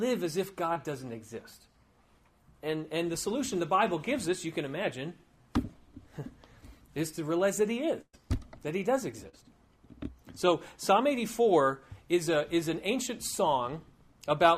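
At 0.73 s there is a brief smear lasting roughly 40 ms, a wobble where the sound seems to stretch rather than stop. This is short concealed packet loss: about 20 ms of audio never arrived in time, and the receiver filled the hole by continuing the preceding sound before blending back into the real signal.

At 8.01 s a longer break runs to 8.15 s. The sound is held and fades, dropping away to about 50 ms of silence, and the audio then resumes further on. This is a burst of packet loss. Roughly 120 ms went missing. The receiver extended the last sound and turned it down as the gap went on, so the material in between is simply gone.

At 9.29 s a second short concealed packet loss produces a similar but slightly longer smear, ending at 9.35 s. About 40 ms was lost here, again patched by carrying the previous sound forward and then crossfading back into the real audio.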